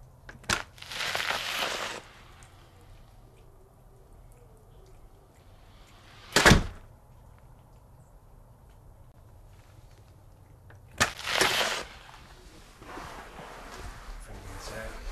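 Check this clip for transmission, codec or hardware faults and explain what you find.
Two kinds of fault are present: skipped compressed frames and blocks of digital silence.

Compressed frames skipped, at 3.48 s and 12.31 s: whole 26.1 ms frames never reached the output, roughly three frames (about 70 ms) at the first point and one (about 30 ms) at the second. The audio jumps forward by the length of the frames left out.

Block of digital silence, from 9.12 to 9.14 s and at 11.14 s: the output buffer was likely not filled in time, so samples were zeroed, 23.22 ms then 11.61 ms, which fits 1024- and 512-sample buffers. The sound drops abruptly to nothing and returns, a brief hole at 9.12 s and a tick or dip at 11.14 s.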